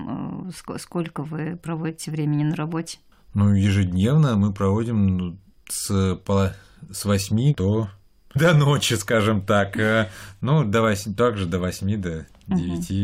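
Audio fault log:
8.35 s, stream segment skipped: the speech jumps abruptly with a small blip right before "до ночи скажем так", with no silent gap. The likely cause is a chunk of the segmented stream that failed to load, so the player went straight on to the next one and a stretch of the talk never arrived. A plain dropout would leave a hole of silence and then pick up where it stopped, whereas here the talk simply lurches ahead.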